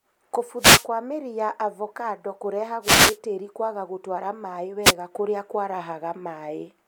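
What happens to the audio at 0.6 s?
A wireless microphone noise hit runs from 0.57 to 0.87 s. The analogue FM radio link fades as reflected signals cancel at the receiver, so receiver noise surges up over the speech, heard as a brief swish of static lasting about 0.3 s.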